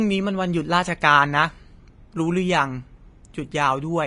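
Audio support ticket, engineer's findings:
Vorbis compression, whole clip. Speech plainly hissy and grainy, tones roughened, consonant attacks blurred. Hard band limit, nothing above 10.6 kHz. Likely cause: low-quality Vorbis encode, damage consistent with a bitrate near 32 kbps. Mechanism: encoder drops the cut-off and quantises the treble residue so coarsely that fine high-frequency detail turns into noise of similar energy over the smooth spectral floor. Present throughout, no clean stretch.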